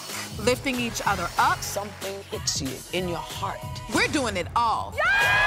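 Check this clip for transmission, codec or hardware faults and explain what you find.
No transmission, codec or hardware faults can be heard.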